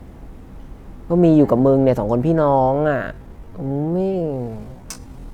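Speech, and from 2.34 s to the end there's a time-stretched section: the pace suddenly drops to about 0.57 times normal speed while the pitch holds steady, so it drags. That's likely software stretching the tail to fill a length.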